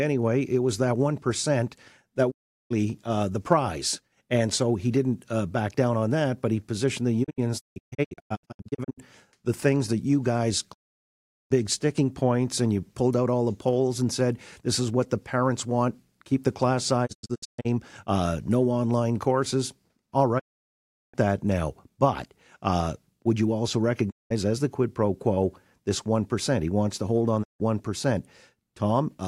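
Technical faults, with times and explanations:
2.30–2.72, 7.23–9.00, 10.72–11.52, 17.05–17.67, 20.38–21.16, 24.09–24.32 and 27.42–27.62 s: digital broadcast dropout. The receiver loses frames and mutes with a quick 20 ms fade, so that audio is lost. At 7.23 and 17.05 s the loss is scattered into several short holes rather than one gap.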